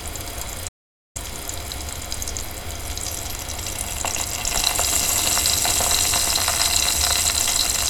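A recording of sounds, with an audio dropout to silence from 0.69 s to 1.16 s, cutting out about 0.47 s of the sound. The signal stops abruptly mid-flow and resumes just as abruptly. The gap is silent with no room tone at all, which sets it apart from a quiet passage, where some background hiss would remain. The likely cause is a brief loss of input, such as a dropped connection or an accidental mute, while recording continued.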